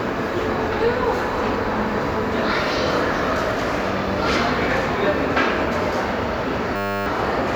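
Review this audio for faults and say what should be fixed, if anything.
A system hang loop at 6.76–7.06 s repeats one 10 ms slice 30 times, giving a 100 Hz buzz. The waveform shows identical repeating cycles, and the spectrogram shows even horizontal lines every 100 Hz. About a third of a second of sound is lost. To prevent it, use a watchdog that mutes the output when the audio driver stops refilling the ring buffer.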